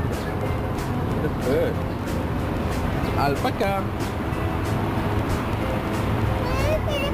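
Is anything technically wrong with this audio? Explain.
Yes, there's crude rate conversion running through the whole clip. Samples were repeated without filtering, which fits a 32 kHz to 44.1 kHz step, leaving error roughly 30 dB down that adds an inharmonic, gritty fizz riding on the louder and brighter parts.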